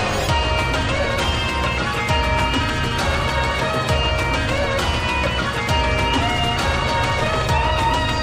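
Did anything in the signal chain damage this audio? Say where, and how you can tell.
Yes. The damage happened at the sample-rate conversion stage, where the audio was raised from 22 kHz to 48 kHz. The result is imaging from linear upsampling. Throughout the clip, the top of the original band sounds dulled, and a faint mirrored copy of the spectrum sits roughly 30 dB down in the 11 kHz to 22 kHz region, adding a light metallic shimmer to sibilants and high content.

Straight-line interpolation between samples filters too weakly to remove those mirror images. This fault differs from codec artefacts because the shimmer is steady rather than swirling or changing frame by frame.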